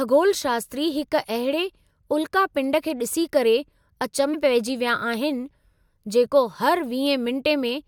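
Speech, with one fault: compressed frames skipped at 4.33 s. At that point the decoder never plays a run of compressed frames, either because they are missing from the stream or because they were rejected as corrupt. The speech lurches forward by roughly 300 ms, which fits about fifteen frames of 21.3 ms each. At the join, a stretch of speech is simply absent.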